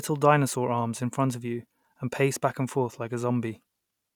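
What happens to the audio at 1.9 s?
Nothing goes wrong at 1.9 s; the speech passes through intact at that point, with no dropout, click or distortion.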